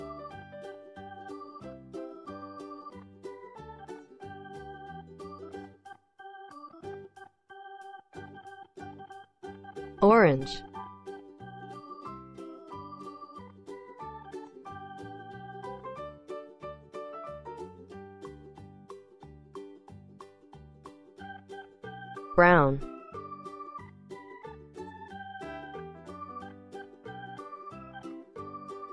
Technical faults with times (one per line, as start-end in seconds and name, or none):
none